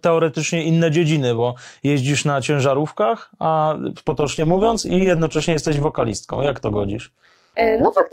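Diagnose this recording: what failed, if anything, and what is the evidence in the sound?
From 4.07 s, right after "jeździsz na ciężarówkach a", and continuing to the end, the speech takes on a metallic buzz. This is overlap-add ripple: the level pulses about 11 dB at around 150 Hz, once per frame, because frame-based processing recombined windowed frames whose overlaps don't sum to constant gain.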